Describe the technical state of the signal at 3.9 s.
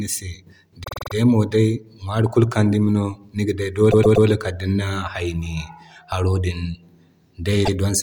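At 3.9 s the speech stutters: a 120 ms piece plays four times in a row, from 3.90 to 4.26 s. This is repeated frames, a short run of compressed frames delivered again, adding 360 ms.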